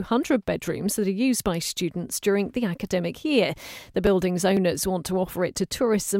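From 3.57 s to 6.07 s, periodic USB or driver dropouts produce a regular tick about every 0.5 s while speech is present. Something stalls the audio path at that fixed interval, and roughly a millisecond of audio is skipped each time, leaving a small splice click.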